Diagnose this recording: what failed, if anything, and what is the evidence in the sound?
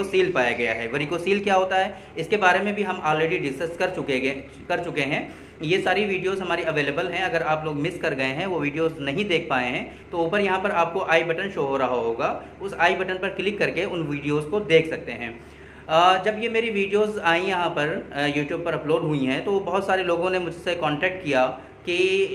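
Clock drift between sender and receiver, at the network and jitter-buffer stage. The sender's clock runs roughly 4 percent fast, so the receiver's buffer keeps overfilling and must shed material throughout. On a waveform there are no dropouts, just small irregular splice points scattered across the clip.

Repeated timing corrections run from 0.11 s to 22.30 s, with the sound effectively playing at 104 percent speed. The receiver trims short pieces at uneven intervals, always in the same direction, so the audio has slight hiccups and a hurried, unsteady tempo. A spectrogram shows tiny vertical seams where tracks jump abruptly.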